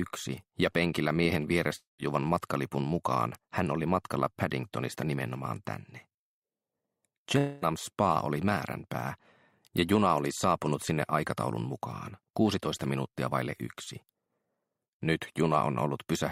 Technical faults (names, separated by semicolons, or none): long network dropout